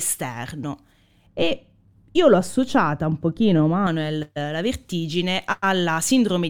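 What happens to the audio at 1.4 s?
The speech turns dull and muffled from 1.27 to 3.87 s, just before "eh la vertigine": de-emphasis applied wrongly, a treble cut meant to undo pre-emphasis applied where none was needed or applied twice, about 11 dB down at 10 kHz.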